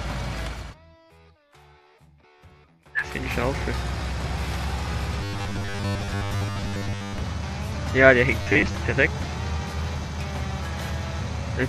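At 0.72 to 0.74 s there's a quick blip from damaged data in a compressed stream. The decoder hit bad bytes, lost frame sync and skipped ahead to the next header. A second, shorter chirp of the same kind lands at 9.94 s.

From 5.21 to 7.18 s, and again from 8.42 to 8.75 s, the sound turns into a stiff, metallic 100 Hz buzz. That's robotic sound from repeated short buffers, likely caused by 10 ms chunks being replayed while most of the real audio in the first stretch, and about half in the second, gets skipped.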